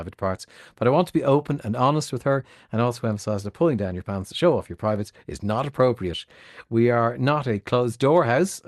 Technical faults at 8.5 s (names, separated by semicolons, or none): none